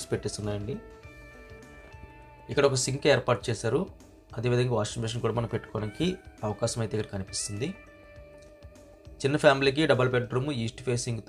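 No technical faults are audible anywhere in the recording.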